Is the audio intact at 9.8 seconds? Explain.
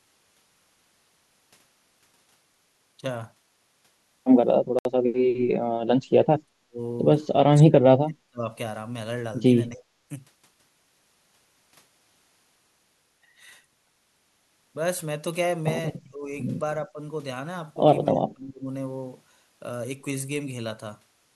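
No. From 9.70 to 9.81 s the speech dips by roughly 10 dB, most likely speech suppressed in double talk, with the echo canceller pulling down its own talker together with the loudspeaker echo. On a waveform the envelope visibly narrows.

From 9.76 to 9.81 s a faint echo leak rides underneath, a copy of the voice delayed by 294 ms and far below the speech. It likely comes from a loudspeaker echo the canceller failed to remove, showing as weak repeated harmonic traces on a spectrogram.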